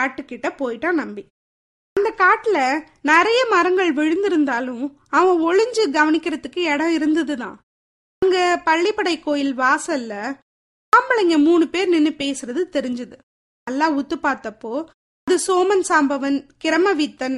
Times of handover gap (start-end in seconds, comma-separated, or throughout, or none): none